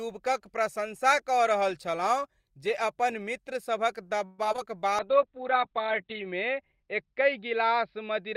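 Speech, with several network faults clustered just past the midpoint. From 4.25 to 4.47 s the sound is replaced by a fading buzzy continuation lasting about 0.19 s, and roughly 60 ms of audio is lost. A long network dropout is the likely cause. Two short concealed packet losses follow, at 4.53 to 4.56 s and 4.56 to 4.60 s. Each leaves a brief smear where the decoder filled the gap from the preceding sound. From 4.90 to 5.92 s a jitter buffer slow-down stretches the speech to 93% speed without changing pitch, adding 78 ms as the receiver rebuilds its reserve. From 5.00 s to the end, a call bitrate drop takes the encoder from 32 kbps to 7 kbps for about 1.2 s at its lowest. The bandwidth narrows from 20 kHz to 4 kHz, so the voice turns muffled and rough.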